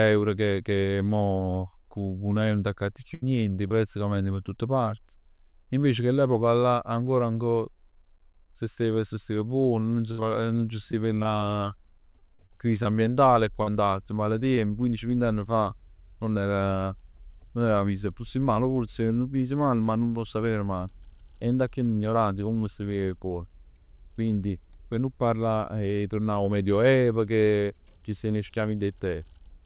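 Repeated packet loss (robotic sound) hits this speech recording from 3.14 to 4.49 s: three holes, up to 77 ms, are patched by stretching the preceding sound, giving a choppy, mechanical stutter. Scattered short gaps follow from 10.11 to 14.71 s, where around fifteen brief dropouts, 340 ms missing in all, leave ticks and small smears as each is bridged by extending the last sound. Throughout, the audio carries nothing above 4 kHz, which fits a narrowband G.711 call path at 64 kbps.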